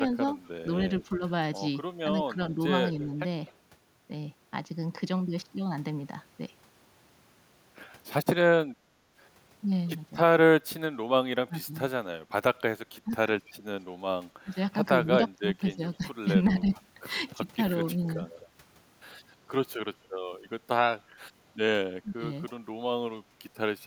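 At 0.45–0.49 s, and again at 3.46–3.54 s and 18.39–18.47 s, brief echo leaks appear: faint delayed copies of the speech about 255 ms behind, roughly 35, 30 and 25 dB below it. The far end's echo canceller was likely leaving residue on a loudspeaker pickup. On a spectrogram they show as faint repeats of the preceding harmonic pattern.

From 1.09 to 3.12 s, and later 11.47–16.65 s and 22.02–22.51 s, the speech is suppressed in double talk. It dips by roughly 10, 15 and then 20 dB in short pieces, likely because the canceller clamped down while both sides spoke. The waveform shows notched envelopes.

At 8.74–9.15 s the background is gated by the echo canceller. The room sound drops by about 13 dB for a few hundred milliseconds while the loudspeaker plays, then returns. This appears as a sudden hole in the noise floor.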